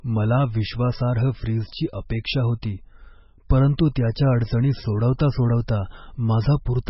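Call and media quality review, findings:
MP3 compression, whole clip: speech sounds watery and swirly, sibilants chirp, attacks smeared. Spectrogram shows a hard ceiling at 5.6 kHz with flickering holes below it. The damage fits a very low bitrate near 16 kbps. Likely cause: MP3 encoder dropping weak spectral lines frame by frame.

Pre-echo at 3.77 s: a brief hiss, about 18 ms long, leads a sharp onset that sounds softened. On the waveform, low-level noise sits just ahead of the attack; on the spectrogram, a faint broadband smear precedes it. Cause: block quantisation noise spreading backward across the transform block.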